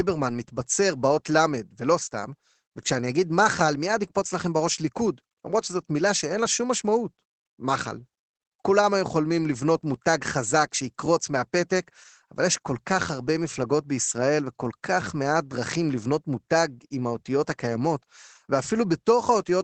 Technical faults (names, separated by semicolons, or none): Opus voice compression